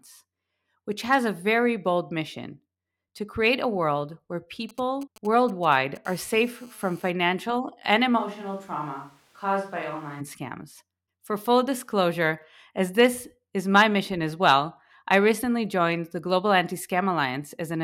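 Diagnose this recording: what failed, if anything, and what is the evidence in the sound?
Radio interference from a nearby 2G handset reached the analogue wiring, where some junction rectified the RF and turned its on-off keying into audio. The first episode is GSM signalling bursts, from 4.69 to 5.97 s, right after "create a world where". These are irregular clusters of ticks and short buzzes at the 217 Hz frame rate, a galloping stutter sitting roughly 25 dB under the speech. That pattern matches a phone exchanging control traffic rather than carrying a call.

The same handset then settles into continuous transmission, producing a GSM phone buzz from 6.05 to 7.11 s. The analogue input again demodulates the 217 Hz burst train, but now the train runs without pauses. The result is a steady, raspy buzz at about 30 dB below the speech, dense with harmonics and with no relation to the talker's pitch or rhythm. 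This continuous buzz is what a phone in an active call produces through unshielded or poorly grounded wiring.

Between 8.20 and 10.19 s the capture stage falls back to another source, most likely a switch to a distant microphone after the close one dropped out. The speech turns hollow and roomy with thinner bass, and its level falls by around 5 dB. Background room noise comes up to sit near 30 dB below the speech. Both transitions are abrupt, with no crossfade, which points to a hard source change rather than the talker moving.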